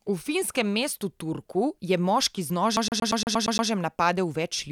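A scratch kept throwing the laser back one track, leaving the CD stuck on one turn from 2.77 to 3.70 s. The same 0.12 s of speech repeats eight times, each pass cut by a brief mute, giving a fast, even mechanical stutter.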